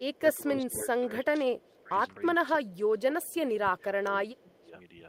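A doubled audio track runs through the whole clip: a second full-band copy of the speech trails the original by roughly a third of a second, a few decibels quieter, with no decay or room colouring. It likely comes from a slower second capture path or two out-of-step copies in an edit.

Echo leak appears briefly at 0.14 to 0.18 s and again at 1.65 to 1.76 s as a very faint scrap of speech returning 315 ms late. The far end's echo canceller likely failed to strip its loudspeaker pickup, so the residue was sent back.

Speech suppressed in double talk runs from 0.18 to 1.96 s, dipping by about 15 dB at worst for well over a second in total, and again from 2.31 to 4.73 s, dropping by about 20 dB for around two seconds. With both sides talking at once, the echo canceller likely could not separate the talker from the echo and pulled the speech down along with it.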